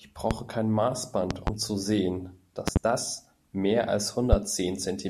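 Loud pops hit at 0.31–0.34, 1.31–1.50 (a double), 2.68–2.79 (another double) and 4.33–4.36 s. They sit roughly 20 dB over the speech and are likely voltage glitches.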